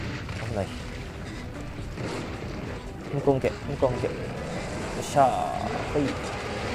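From 0.44 s to 6.47 s, periodic USB or driver dropouts recur once per second, each dropping well under a millisecond of audio to silence, heard as regular ticks.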